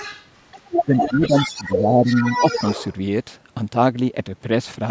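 Right from the start there's other side's voice leaking through: faint from 0.00 to 0.28 s, roughly 20 dB under the talker, then much stronger from 0.51 to 1.81 s, only about 5 dB down, and again from 2.06 to 2.95 s at about 10 dB below. It's likely loudspeaker echo the canceller didn't fully remove.

Overlapping that, from 0.86 to 2.45 s, there's speech suppressed in double talk. The talker's level dips by around 10 dB in patches adding up to about a second, likely because the canceller couldn't tell them apart from the echo and ducked everything. All of it sits in a call-processed band with nothing above 8 kHz.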